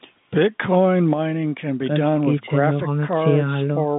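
No technical faults can be heard anywhere in the speech. It carries the narrow band of G.711 telephone coding, spanning 150 Hz to 3.7 kHz with nothing above 3.8 kHz.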